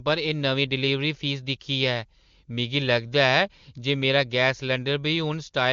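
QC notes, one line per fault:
No faults heard anywhere in this speech recording.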